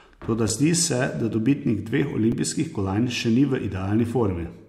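A speech clip with two tiny blocks of digital silence, each about 5 ms: one at 0.49 s just before "zdi se da dobitnik", and one at 2.32 s between "se da dobitnik dveh" and "kolajn še ni v". Each drop to zero and back has hard edges, so it comes across as a tick, which points to the output buffer not being filled in time.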